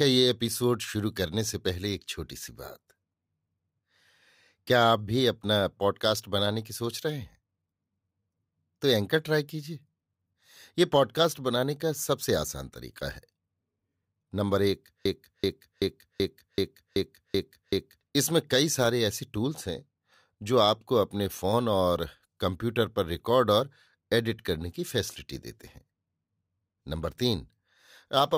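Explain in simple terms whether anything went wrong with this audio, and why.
Something in the playback or streaming chain likely stalled and kept replaying the last scrap of audio it held. This is a broken-record loop: from 15.05 to 18.01 s, a 0.38-second snippet of speech repeats eight times, and whatever was said during those seconds is lost.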